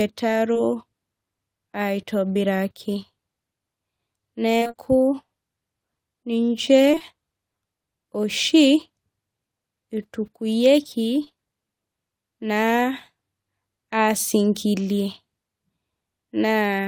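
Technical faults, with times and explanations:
2.33 to 2.37 s, short concealed packet loss: a brief smear in the speech, where about 20 ms never arrived and the receiver extended the preceding sound to cover it.
4.59 to 4.75 s, repeated packet loss (robotic sound): choppy speech with pieces missing. Four gaps, the longest 22 ms, were patched one after another, so about half of this stretch is filled-in sound.
6.91 to 7.02 s, short concealed packet loss: three back-to-back losses of about 20 ms each produce a wobbly blur. The gap sizes fit 20 ms packets, each concealed by continuing the prior sound.
11.24 to 11.32 s, short concealed packet loss: two consecutive losses of about 20 ms each cause a short smear as the decoder extends earlier sound and then blends back in.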